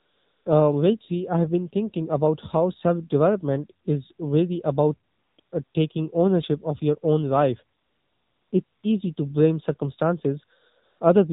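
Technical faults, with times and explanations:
Throughout: AMR narrowband mobile codec. The speech has passed through AMR-NB at 7.4 kbps, so nothing above 4 kHz survives. The low bitrate leaves the voice plainly buzzy and synthetic, because few pulses drive the vocal-tract model in each subframe.
0.00 to 0.46 s, 5.12 to 5.38 s, 5.40 to 5.52 s, 5.64 to 5.74 s, 7.78 to 8.52 s, 8.64 to 8.84 s and 10.84 to 11.00 s: AMR comfort noise. In these pauses no speech frames were sent. The receiver filled them with smooth synthetic noise, which switches in and out against the real background.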